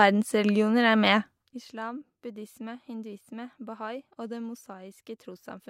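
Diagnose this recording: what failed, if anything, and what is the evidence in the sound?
Zipper noise runs from 1.17 to 1.69 s, just before "buddhisme hinduisme", as the speech drops by roughly 15 dB. The gain is applied in 1 dB steps at about 50 steps per second rather than as a continuous ramp. That points to a gain stage in the driver or buffer processing that updates once per block, which fits blocks of roughly 20 ms. Each abrupt step leaves a small click, and the series forms a fine ticking buzz over the fade.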